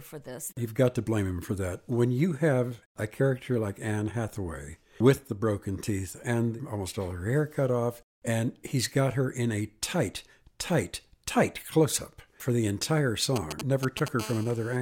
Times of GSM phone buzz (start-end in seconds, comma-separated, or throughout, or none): 14.20-14.77